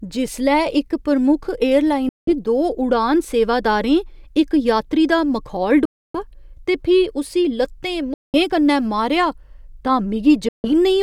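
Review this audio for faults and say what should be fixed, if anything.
Bluetooth dropouts silence the speech at 2.09–2.33, 5.85–6.23, 8.14–8.35 and 10.49–10.70 s. It resumes further on, as though it had kept playing, likely because wireless packets arrived late and were discarded. To prevent this, shorten the headphone-to-source distance and reduce radio interference, or use a wired connection.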